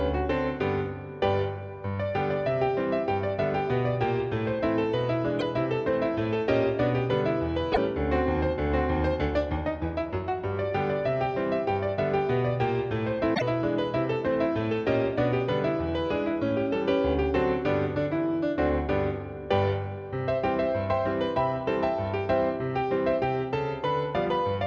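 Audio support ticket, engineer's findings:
Damaged data in compressed stream: brief chirp/blip dropouts at 5.39–5.43 s, 7.69–7.78 s, 13.31–13.42 s. Decoder-side: corrupt frames misread or rejected, sync lost until next valid frame header found. Check transport/storage integrity upstream of decoder.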